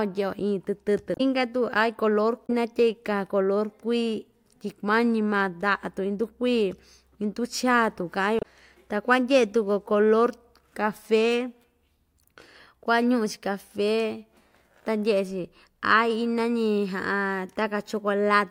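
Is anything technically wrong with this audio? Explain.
Yes. The speech carries damaged data in a compressed stream, heard three times: at 1.14 to 1.21 s, at 2.46 to 2.50 s, and at 8.39 to 8.45 s. Each lasts a few tens of milliseconds. At these points the compressed data was corrupted. The decoder cannot read those frames properly, loses its place, and hunts for the next valid frame header. Each event is a brief disruption breaking into the speech.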